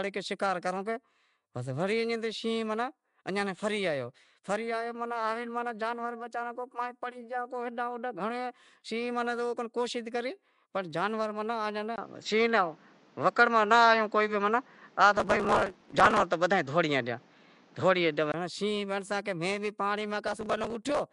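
From the first moment the speech carries a rough, hissy halo and a smeared, underwater quality. The likely cause is Nellymoser compression, which spends a fixed, small bit budget on short blocks and fills the bands it starves with noise, at a rate that fits a 44 kbps stream. On a spectrogram the content stops sharply at 10.6 kHz, and the upper bands look speckled and grainy instead of showing clean harmonic lines.

At 11.96 s the waveform drops to a flat gap of about 20 ms. After the gap the sound turns duller and boxier, and its level shifts by about 5 dB. A new background hiss sits about 35 dB below the signal. This is likely an input switched to a poorer device. The new device passes a narrower band, so on the spectrogram everything above 7.6 kHz vanishes and a faint, steady noise floor appears. The fuller sound returns at 18.34 s.

From 15.17 to 16.22 s, still within that duller stretch, a burst of gritty crackle tears across the sound. 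This is processor overload crackle. Well over a hundred audio buffers, each under a millisecond long, miss their deadlines and are skipped. The waveform shows dense hard-edged discontinuities, and the spectrogram shows vertical broadband streaks. A shorter burst of the same crackle, with a few dozen skips, runs from 20.27 to 21.02 s.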